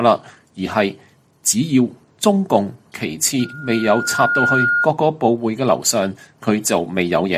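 At 3.40 s a loudspeaker feedback squeal starts: a single tone near 1.4 kHz swells over about a second until it sits at roughly the level of the sound itself, then stops at 4.88 s. The microphone was hearing its own loudspeaker, and at that frequency the loop gain exceeded one.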